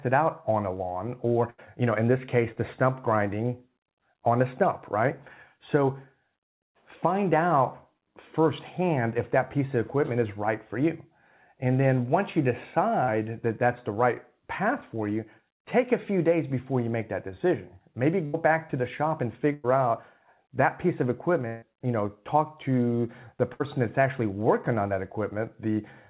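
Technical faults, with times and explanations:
1.5–1.6 s, 18.26–18.35 s, 19.53–19.66 s, 21.48–21.64 s and 23.54–23.62 s: burst of packet loss. Each time 60 to 140 ms of speech is lost. The receiver carries the last sound on and fades it. Voiced parts become a held buzz, others a fading hiss. Speech then resumes further on.
2.52–2.58 s and 13.04–13.10 s: short concealed packet loss. About 40 ms arrived too late each time. The receiver continued the preceding sound, from its pitch or as shaped noise, then blended back into the real audio. Each gap is a brief smear or wobble.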